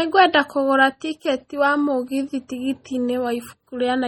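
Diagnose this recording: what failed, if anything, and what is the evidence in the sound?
MP3 compression damage runs through the whole speech recording, and the failure sits at the codec stage. The sound is watery and swirling, with the sibilants turning metallic and chirpy and consonant attacks smeared. Nothing is present above 17.5 kHz. The likely cause is an MP3 encode at a very low bitrate, around 32 kbps: starved of bits, the encoder cut the treble and kept dropping weak frequency lines in and out between frames, which produces the heavy artefacts heard here.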